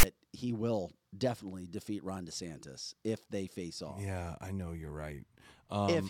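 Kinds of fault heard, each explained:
File tags played as audio: A block of text metadata at the head of the file is being decoded as if it were samples. It sounds like a harsh, one-sided rasp with hard edges. It lasts about 32 ms from the start, just before "he will definitely defeat".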